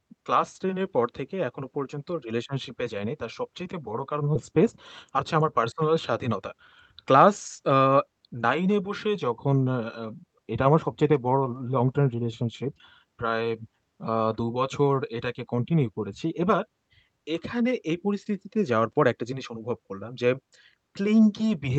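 At 4.35 s there's a skip ahead: roughly 0.7 s of queued speech was dropped, so the talk jumps forward with no gap at all. Right after, the jitter buffer speed-up kicks in, from 5.15 to 6.54 s at about 109% and again from 7.04 to 9.16 s at 108%. Tiny pitch-period slices get trimmed to drain the extra delay, so the speech sounds hurried but keeps its pitch.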